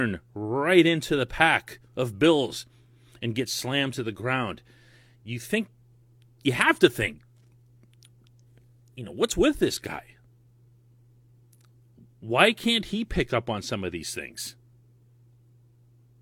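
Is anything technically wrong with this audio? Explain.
No, nothing here stands out as a technical problem, so there's nothing to flag in this one.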